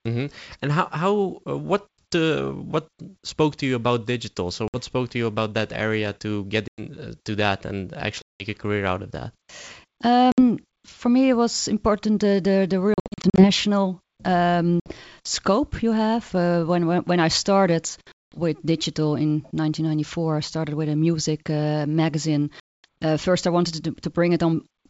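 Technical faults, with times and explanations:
4.68–4.77 s, 6.68–6.81 s, 8.22–8.45 s, 10.32–10.39 s, 12.94–13.47 s (after "important the the the"), 14.80–14.92 s (before "scope you have"), 18.12–18.38 s, 22.60–22.85 s (after "a music uh magazine"): packet loss on an ADPCM call. The speech drops into abrupt silent holes lasting 60 to 240 ms, while around 12.94 s it breaks up into short gaps of up to 60 ms each. After each hole the speech resumes with a click, a wrong level or brief distortion, which settles within tens of milliseconds. The decoder's adaptive predictor and step size drift away from the sender's during the gap and then have to re-converge. Between the holes the G.722 wideband coding stays clear up to 7 kHz.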